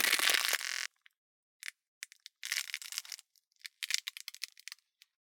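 At 0.65 s the system hangs while the sound hardware keeps replaying its ring buffer, producing a system hang loop that lasts until 0.86 s. The same 23.2 ms slice repeats nine times, which fits a 1024-sample buffer. Cycling at 43.1 Hz, it is heard as a steady, rough buzz instead of a stutter. When playback resumes, about a fifth of a second of audio has gone missing.

At 2.84 s the decoder drops whole frames of the compressed stream, so compressed frames are skipped until 2.89 s. The sound jumps ahead by roughly 50 ms, a span of frame-length chunks that never gets played.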